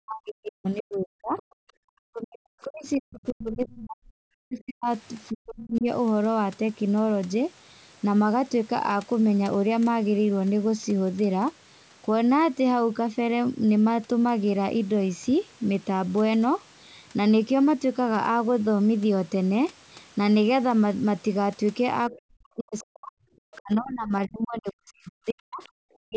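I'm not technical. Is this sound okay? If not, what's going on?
No. Two things go wrong, both at the start and end of the clip.

From the start to about 5.9 seconds, and again from 22.1 seconds to the end, the speech keeps dipping, thinning out or dropping almost to silence in pieces. This is speech suppressed in double talk: both people were likely talking at once, and the call's echo canceller, unable to tell the talker from the loudspeaker's echo, turned everything down. Unlike a bad connection, the sound doesn't stutter or garble. It just gets quieter in patches while the other person talks.

Within those same stretches, very brief, faint scraps of a second voice slip through, at 1.38–1.42, 22.13–22.17, 22.79–22.85 and 23.53–23.58 seconds. This is the other side's voice leaking through: the talker's device is playing the other person on its speaker, and the echo canceller likely failed to remove all of it from the microphone. 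The difference from the dips is that this adds a sound rather than taking one away. Each scrap is tiny, well under a tenth of a second.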